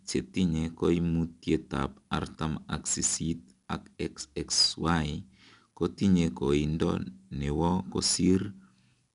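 Throughout, 4-bit ADPCM compression codes each sample as a coarse predicted step, leaving a plainly audible gritty hiss riding the louder speech and nothing above 10.6 kHz.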